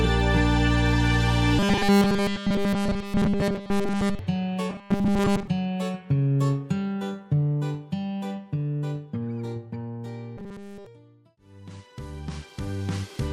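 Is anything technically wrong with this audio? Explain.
Yes. From 1.59 to 4.19 s, again from 4.70 to 5.48 s, and from 10.37 to 10.86 s, the sound collapses into a rigid, metallic buzz at 200 Hz that only loosely tracks the original contour. This is robotic sound from repeated short buffers. The likely cause is that fresh audio stopped arriving in time, so the playback kept looping the last 5 ms chunk. Throughout each stretch essentially all of the output is repetition, which imposes that fixed 200 Hz tone.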